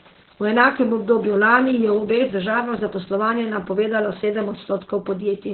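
Opus voice compression runs through the whole clip. Nothing in the speech reaches above about 4.1 kHz, the narrowband limit, so the sibilants and breathy detail that live higher up are gone and the voice sounds muffled, like an old phone line. The excitation is coded very coarsely, giving a hoarse, slightly robotic, buzzy grain to the voice. That heavy damage points to the SILK linear-prediction coder working at a very low bitrate, which fits about 8 kbps.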